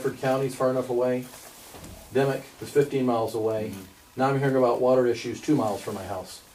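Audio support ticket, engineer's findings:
Crude rate conversion, 5.13 s to end of clip. Gritty, inharmonic fizz following loud and high content. Resampler stage: sound fits 44.1 kHz to 48 kHz via plain linear interpolation, no anti-alias filtering. Error products around 35 dB below signal. Spectrogram: extra partials, inharmonic, shifted off the true ones. Waveform: hard to spot by eye.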